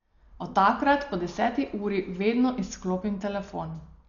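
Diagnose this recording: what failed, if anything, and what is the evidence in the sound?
The codec stage failed, most likely through Dolby Digital compression at a very low bitrate. The speech sounds dull for the whole clip, with nothing above 6.9 kHz. A rough, fluttering noise clings to the voiced sounds. That fits an AC-3 style encoder starved of bits, perhaps around 48 kbps. It narrowed the band and left many frequency lines with no mantissa data. The decoder then filled those gaps with dither noise, and the damage is heavy.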